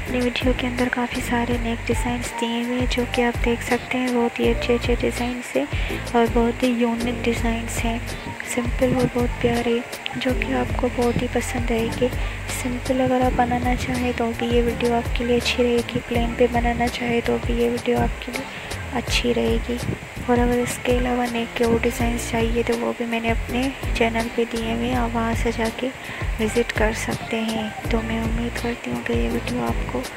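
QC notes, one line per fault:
No faults found on the QC pass.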